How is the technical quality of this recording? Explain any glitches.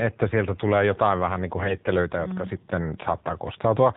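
Quality is pretty rough: it's a phone-grade recording with plainly audible codec damage throughout, plus one short burst of corruption in the middle.

The whole clip runs through the AMR narrowband mobile codec. Everything above 4 kHz is gone, and the voice model, driven by sparse pulses, leaves the speech plainly buzzy and synthetic, which fits a low bitrate of about 7.4 kbps.

From 1.6 to 1.94 s there are AMR bit errors. Some of the less protected bits in each frame arrived flipped, at a rate of a few percent, so the excitation pulses and fine parameters decode wrong. Pitch and level hold roughly, but the voice turns hoarse, scratchy and gargly.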